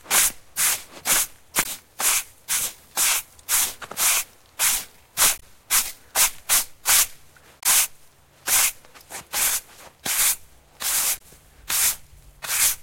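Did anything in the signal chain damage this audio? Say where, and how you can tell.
Yes. The damage happened at the codec stage, as damaged data in a compressed stream. Four brief blips break through the sound at 1.61 to 1.66 s, 5.38 to 5.43 s, 7.60 to 7.66 s and 11.17 to 11.21 s. Each lasts roughly 40 to 60 ms. Corrupted bytes made the decoder misread those frames and lose sync. It then hunted for the next valid frame header. That short garbled stretch is the blip you hear.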